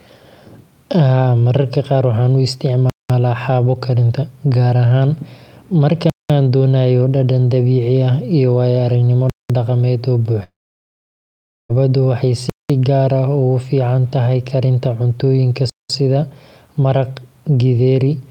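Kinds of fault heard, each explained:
Gap between chunks: The speech arrives in pieces about 3 seconds long, with a silent hole left at each join. Each hole lasts 200 ms. They fall at 2.90, 6.10, 9.30, 12.50 and 15.70 s, a steady beat roughly every 3.2 seconds. Nothing is lost, but the flow is cut each time. The hole at 9.30 s comes just before "dhaqameed oo", and the one at 15.70 s just after "fiican tahay karinta cuntooyinka".
Long network dropout: Right after "dhaqameed oo", from 10.43 to 11.71 s, the audio stops arriving. This is likely a network outage. The receiver briefly stretches the last sound into a fading buzz, then about 1.18 s of silence follows. When the speech returns, roughly 1.26 s of it is simply missing and never played. The words resume further on, not where they left off, so the sentence jumps.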